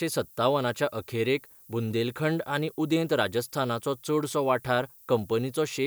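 Speech carries low bit depth with noise shaping from start to finish: a steady, thin hiss, roughly 25 dB below the voice, that climbs toward the top of the band, consistent with 9-bit quantisation whose rounding error is pushed upward. A spectrogram shows a constant noise floor brightening toward the highest frequencies.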